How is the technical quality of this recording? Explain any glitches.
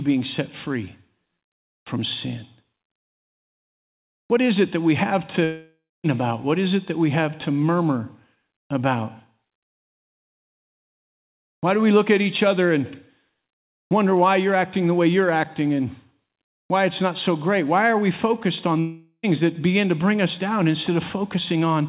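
The recording has two gaps in the sound, and the whole thing is band-limited call audio with nothing above 4 kHz, which points to a G.711 mu-law phone-style codec at 64 kbps.

Both gaps are likely a long network dropout. The first runs from 5.44 to 6.06 s, right after "it that we have". About 0.6 s of audio never arrived, so the receiver stretched the last bit of sound into a fading buzz, then went quiet for roughly the final quarter second. The second runs from 18.80 to 19.25 s, between "are we focused on" and "that begin to bring". About 0.44 s is lost, and it's almost all filled with that fading smear, with only a brief silence before the sound picks up again. In both spots the missing audio is simply gone.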